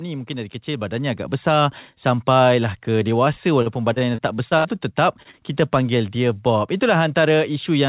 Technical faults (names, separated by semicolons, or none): automatic gain rising; repeated packet loss (robotic sound); short stall from a late packet; short concealed packet loss